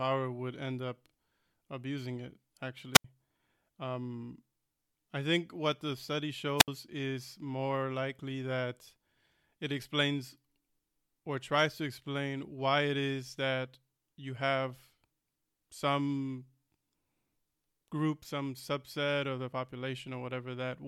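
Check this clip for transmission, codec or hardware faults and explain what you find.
Two wireless microphone squelch dropouts occur, at 2.94 to 3.04 s and 6.57 to 6.68 s. Each time the FM radio link weakens until the receiver's squelch shuts its output, so a brief burst of hiss gives way to roughly 79 ms and 67 ms of near silence before the speech resumes.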